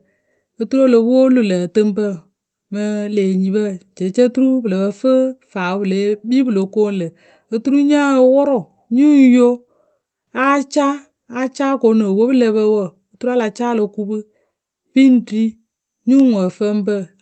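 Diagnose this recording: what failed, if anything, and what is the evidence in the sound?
Nothing failed in this recording.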